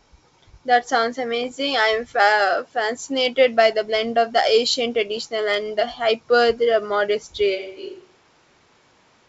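At 1.44 s, a short stretch of bit errors on the ADPCM link runs until about 1.52 s. The speech breaks into a cluster of pops and a rough, gritty burst with quick jumps in level. Each corrupted bit throws off the decoder's step size and prediction, so the damage rings on briefly rather than staying a single click. The density of the disturbance suggests an error rate of roughly half a percent.

From 7.57 s to the end, the speech suddenly turns roomy and hollow, drops about 10 dB in level, and loses low-end weight. Background noise rises to about 25 dB below the speech. This abrupt change in character is likely a switch to a distant microphone, with the close microphone's feed lost and a farther pickup carrying the remainder of the recording.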